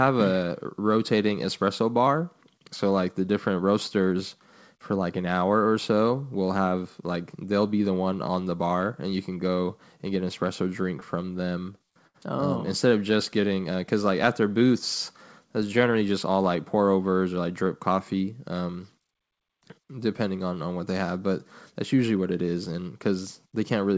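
From 11.00 to 12.16 s, packets kept arriving late, so the jitter buffer ran dry nine times and the receiver stretched the last sound to cover each gap. That repeated stalls (stutter) adds about 154 ms of filler, the longest stall 74 ms, so the speech drags and catches repeatedly.

Between 13.41 and 13.73 s, the jitter buffer, running short of reserve, repeated single pitch periods to gain time. This jitter buffer slow-down inserts 41 ms, playing the speech at 90% speed with unchanged pitch, so syllables sound drawn out.

From 15.80 to 16.37 s, the buffer held more audio than its target, and the receiver trimmed out short pitch-period chunks to reduce delay. This jitter buffer speed-up removes roughly 70 ms, running at 110% speed at the same pitch, so the speech sounds briefly hurried.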